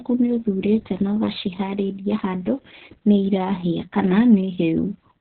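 From start to finish the speech has been through heavy Opus voice compression. The coder ran in its SILK linear-prediction mode at narrowband, which matches a very low setting around 6 kbps, possibly with long 60 ms frames. Nothing remains above about 4.4 kHz, so the speech sounds muffled and telephone-like. The excitation is coded so coarsely that the voice turns hoarse and slightly robotic, with a rough, buzzy texture throughout.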